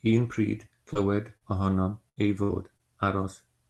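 Repeated packet loss (robotic sound) runs from 0.33 to 2.81 s: five short gaps, the longest 70 ms, are patched by stretching the preceding speech, giving choppy stretches.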